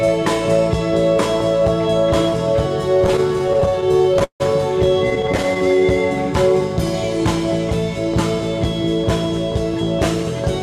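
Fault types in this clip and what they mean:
Repeated stalls (stutter): packets reached the receiver late, so its jitter buffer kept running dry and each gap was bridged by extending the last sound, fading it across the longest waits. Roughly twenty stalls fall between 3.01 and 4.42 s, holding up to 158 ms, then about eleven brief ones of around 11 ms between 5.10 and 5.81 s. Nothing is lost, but timing drags. A spectrogram shows short, flat, smeared stretches, and the waveform shows repeated copied cycles.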